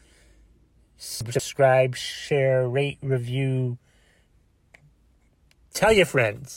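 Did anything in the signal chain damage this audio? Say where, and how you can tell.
Yes, chunks out of order at the driver or buffer stage. Between 1.21 and 1.39 s, one block of about 46 ms was written three blocks late, so it plays after the three that should follow it. No audio is missing, but the speech in that stretch comes out scrambled, and there are three hard joins where mismatched blocks meet, giving a brief jumbled moment.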